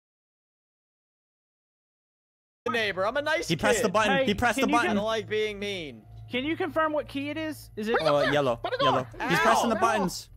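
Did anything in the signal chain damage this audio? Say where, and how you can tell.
Yes, an audio dropout to silence: silence from the start to 2.66 s, no room tone, then sound arrives mid-flow. Likely a lost input link.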